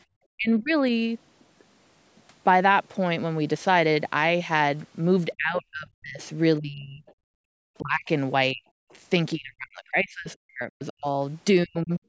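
At 0.04 to 0.09 s the echo canceller clamped the microphone while the loudspeaker played, so the room background gated: it dipped about 25 dB for roughly 50 ms. From 0.37 to 0.72 s the talker's speech is pulled down by as much as roughly 40 dB, likely speech suppressed in double talk, with the canceller mistaking both voices for echo. The same happens in pieces across 5.37 to 12.01 s, about three seconds in all. The canceller also failed to remove the far end, likely the other side's voice leaking through, as a faint voice roughly 35 dB below the talker from 6.22 to 7.14 s and a brief scrap at 8.9 s. The background gates again at 7.32 to 7.5 s, dropping about 40 dB.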